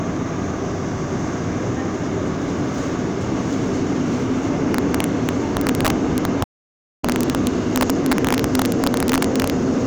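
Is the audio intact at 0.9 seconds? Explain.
Yes, at 0.9 s the audio plays through intact, with no dropout, click, distortion or other fault at that moment.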